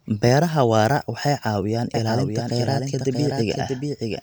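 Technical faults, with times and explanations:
1.94 s to end, doubled audio track: Just after "waara waxay caawiyaan", a second full-band copy of the speech abruptly joins and continues to the end, trailing the original by roughly 0.7 s and sitting about 5 dB lower. It has no reverberant tail or room colouring, so it sounds like the same recording layered out of step rather than an echo. The likely cause is the signal being captured a second time through a slower path.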